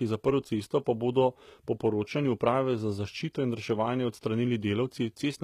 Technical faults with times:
0.00-5.43 HE-AAC compression

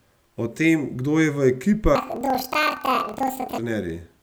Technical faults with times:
1.95-3.60 planar audio read as interleaved

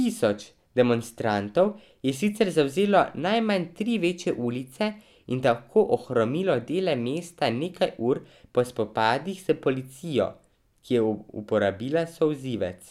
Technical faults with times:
none

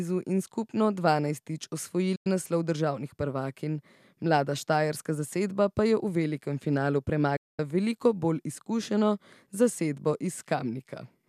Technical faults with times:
2.15-2.27 digital broadcast dropout
7.36-7.59 digital broadcast dropout

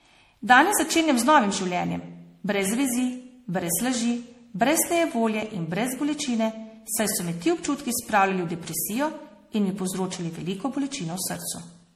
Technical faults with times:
0.00-11.95 generation loss

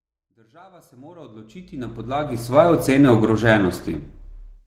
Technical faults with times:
1.84-4.67 adaptive stream at a lower bitrate

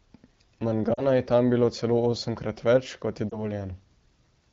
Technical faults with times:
0.93-1.02 lost AMR speech frames
3.30-3.50 lost AMR speech frames

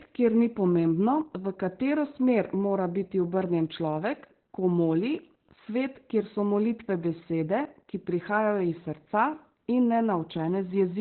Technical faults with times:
0.00-11.00 Opus voice compression

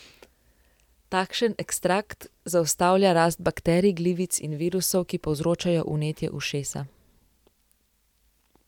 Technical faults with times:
none

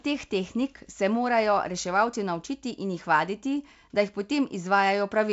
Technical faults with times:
none

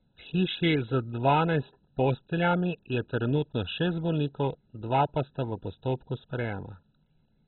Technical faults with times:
0.00-7.47 MP2 compression

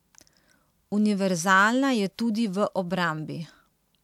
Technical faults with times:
none

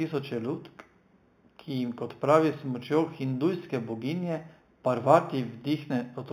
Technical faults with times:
0.00-6.32 imaging from linear upsampling

